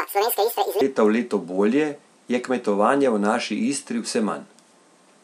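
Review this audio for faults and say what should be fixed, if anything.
Section at the wrong speed, 0.00 to 0.81 s: the opening speech runs 1.85 times too fast, so it sounds hurried and about ten semitones too high before snapping to normal pace. The likely cause is that this stretch was played against the wrong clock, shifting speed and pitch together. Prevent it by confirming every segment's sample rate and playback clock match before editing or export.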